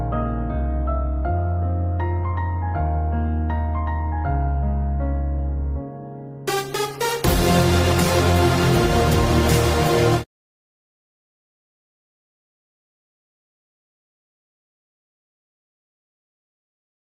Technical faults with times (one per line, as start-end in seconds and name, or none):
none